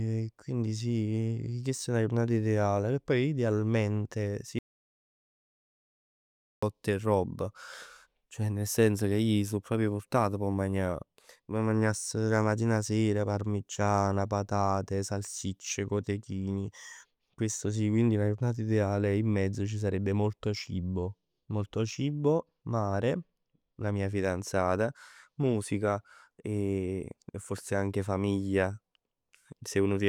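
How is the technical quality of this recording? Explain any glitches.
The recording has one clear glitch. From 4.59 to 6.63 s, just after "poi idealmente si", there is an audio dropout to silence lasting about 2.04 s, with sound resuming mid-flow at "'e roba". The input was likely lost while writing continued, leaving silence. Unlike a natural pause or noise gate, no room tone or breath survives, and the cut is abrupt at both edges.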